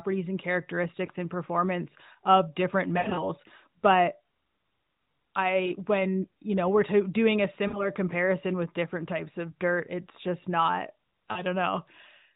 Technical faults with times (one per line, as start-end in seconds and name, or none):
1.06-1.10 lost AMR speech frames
2.98-3.27 lost AMR speech frames
5.66-5.75 lost AMR speech frames
7.68-7.88 lost AMR speech frames
11.32-11.42 lost AMR speech frames